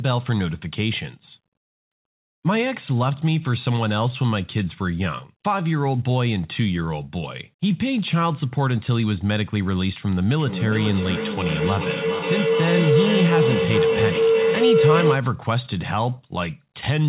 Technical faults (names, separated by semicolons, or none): feedback howl